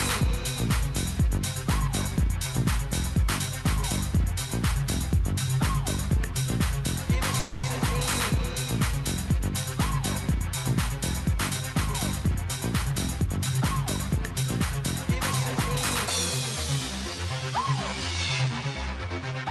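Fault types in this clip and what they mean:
Call audio freeze: at 7.39 s the sound stalls and the last bit is stretched into a fading buzz for about 240 ms, likely packets held up emptying the jitter buffer, then it resumes without losing anything.
Jitter buffer speed-up: from 12.85 to 13.86 s the receiver trims tiny pitch-period slices to shed built-up delay, so the audio runs about 109% fast at unchanged pitch and sounds hurried.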